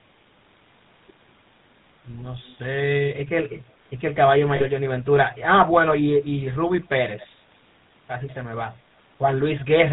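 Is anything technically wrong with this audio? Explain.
Yes. Two faults are audible.

The whole clip carries the sound of the GSM full-rate codec. The speech has a buzzy, gravelly roughness, and the damage is plainly audible. This codec models the vocal tract and excites it with evenly spaced pulses. Only every third sample of that excitation survives. Nothing above 4 kHz gets through, so the top end is missing. The coarseness fits the old 13 kbps GSM rate.

Lost GSM frames occur from 4.56 to 4.65 s. For roughly 40 ms, the decoder has no good data. It repeats the settings of the last good frame. The speech freezes briefly into a rough, metallic ring instead of moving on. The gap is short, so it never fades fully to silence. The length fits two lost frames.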